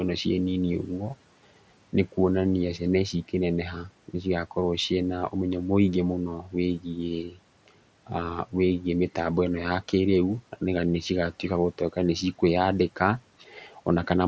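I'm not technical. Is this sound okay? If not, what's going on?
No, there are three brief dropouts from the noise suppressor cutting into speech: at 6.42 to 6.54 seconds, right after "ũmenyo mũingĩ mũno", then at 7.27 to 7.39 seconds, and at 13.46 to 13.73 seconds. The call's noise filter mistook a bit of quiet speech for background noise and turned it down along with the room noise. For roughly a tenth of a second the first two times, and about 0.15 seconds the third time, a sound or word ending comes out faint or swallowed.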